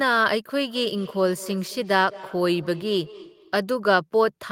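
From 0.59 s to 3.68 s, the speech comes back as a faint repeat trailing each phrase, about a fifth of a second behind and at most about 20 dB below the voice. This is feedback echo between two devices. Two devices in the same room are on the call, so one device's microphone picks up the other's loudspeaker and returns the sound. Neither echo canceller removes it, because each only cancels what its own device plays.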